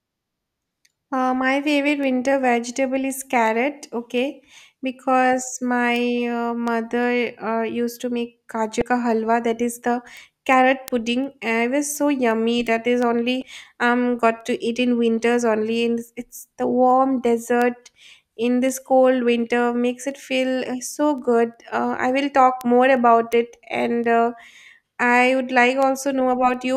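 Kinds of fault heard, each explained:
Word clock ticks: The receiving device runs on its own clock rather than locking to the sender's digital link, so one sample slips each time the clocks drift past each other. This speech carries ticks about every 0.4 s from 0.25 s to 26.54 s, which points to a mismatch of roughly 50 ppm.
Damaged data in a compressed stream: Corrupted bytes in the compressed data made the decoder misread frames and lose sync until it found the next valid header. The speech is broken by two brief blips, each about 30 ms long, at 8.79 s and 13.39 s.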